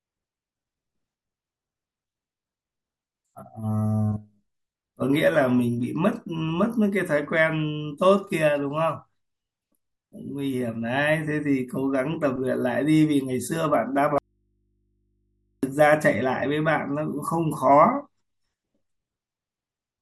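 Audio dropout to a faint residue, 14.18 to 15.63 s: speech abruptly vanishes, leaving only faint mains hum from a likely open, still-live input.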